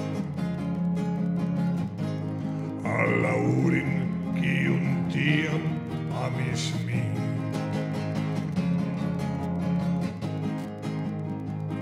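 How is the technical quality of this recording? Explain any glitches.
The recording carries one audible fault, present from start to finish. Wi-Fi interference runs throughout as a steady tick repeating every 102.4 ms, roughly ten per second, sitting around 40 dB below the audio. A nearby Wi-Fi radio's beacon transmissions are being picked up and rectified by the audio circuitry, turning each radio burst into a faint click.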